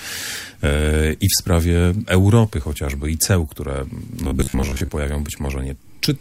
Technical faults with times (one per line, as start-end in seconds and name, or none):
4.24-4.91 robotic sound from repeated short buffers